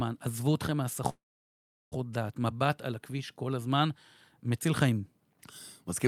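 1.09 to 1.94 s: call audio freeze, likely a jitter buffer underrun. A fading buzz gives way to a near-flat waveform for 0.73 s, and speech resumes intact, 0.82 s late.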